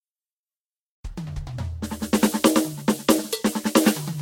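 Throughout the music, generation loss: swirly, hollow, smeared attacks and nothing above 16.7 kHz, likely from roughly ten successive lossy re-encodes, consistent with Vorbis around 55 kbit/s.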